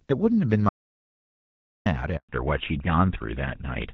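From 0.69 to 1.86 s there is an audio dropout to silence. The input was likely lost, through a disconnected source or a stray mute, while recording carried on writing silence. The speech cuts off mid-flow and returns after about 1.17 s of silence with no room tone.

At 2.17 s a handover gap follows. The call was passed between networks and no speech frames arrived during the switch, so the voice fades within a few tens of milliseconds and stays silent for 120 ms until the new link delivers audio again.

From 2.29 s to the end, the call shows a fallback to narrowband. Before the switch, the HD Voice path sounds like AMR-WB at 12.65 kbit/s, clear with only light coding roughness. Afterwards, everything above 4 kHz is gone, which points to GSM full rate at 13 kbit/s, and the speech turns duller and rougher.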